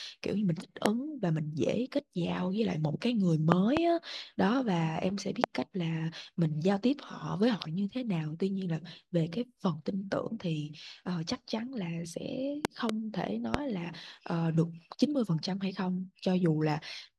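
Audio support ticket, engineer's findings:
Loud pop, five events: voltage step or pulse entering the signal path, likely from a connector, switch, static discharge or driver glitch, shaped by downstream circuitry. Heard as sharp pops some 25 dB over the speech, which continues underneath. Single pops at 0.86–0.88 s, 5.44–5.46 s and 13.54–13.57 s. Double pops in quick succession at 3.52–3.79 s and 12.65–12.92 s.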